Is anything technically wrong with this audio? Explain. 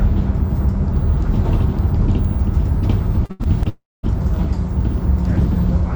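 Yes. From 3.25 to 3.67 s there is repeated packet loss (robotic sound). Four gaps, the longest 82 ms, are patched by stretching the preceding sound, which leaves about 38% of that span concealed. It sounds choppy. On a spectrogram this shows as short smeared, repeated bands broken by small notches.

Right after, from 3.69 to 4.05 s, comes what is likely a long network dropout. About 340 ms of audio is missing. A brief decaying buzz or hiss gives way to roughly 220 ms of silence, and the sound then resumes. The waveform shows a fading tail followed by a flat gap.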